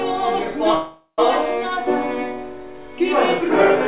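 From 0.74 s to 1.20 s the audio stalls in what sounds like a call audio freeze, heard through a band that stops at 4 kHz, consistent with G.711 A-law. The last sound is carried on as a buzzy or hissy, fading continuation that ends in about 130 ms of silence. When playback resumes it picks up where it left off, with nothing lost. The likely cause is delayed packets draining the jitter buffer, adding about 440 ms of delay.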